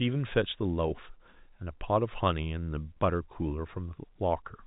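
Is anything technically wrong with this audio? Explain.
No, nothing's wrong here: it's just ordinary telephone-style speech, which fits 64 kbps G.711 A-law coding, with nothing above about 3.8 kHz and only the faint, level-following grain that format always carries.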